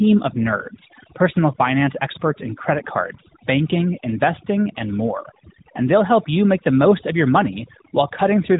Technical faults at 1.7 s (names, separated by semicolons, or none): overdone noise removal; AMR narrowband mobile codec